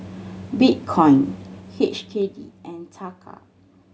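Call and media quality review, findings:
Zipper noise, 1.30 to 2.75 s: ticking rides on the speech as the level drops by roughly 20 dB. Gain applied in 2 dB jumps, about seven a second, no smoothing, so each jump clicks. Probable gain stage or AGC. Worth checking the zipper path's gain ramping.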